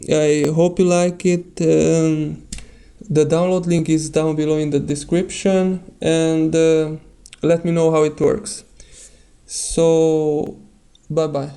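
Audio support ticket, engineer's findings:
Regular clicks from 0.45 s to 10.47 s, one every 1.11 s, about ten in all. Likely clock drift buffer slips between two independently clocked devices. A clock mismatch of around 1000 ppm makes the buffer fill or drain steadily. When it overflows or runs dry, a few dozen samples are dropped or repeated. Each slip breaks the waveform and produces a click. Check the clock sync or sample-rate conversion between the devices.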